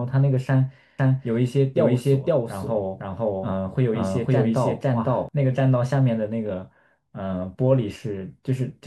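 From 0.99 s to 5.29 s the speech is heard twice: a doubled audio track, with a second full-band copy trailing the first by about half a second and at much the same loudness. The likely cause is the signal being captured again through a slower path. Unlike an echo or reverb, the copy has no decay and no room colouring, and it switches on and off abruptly at those two points.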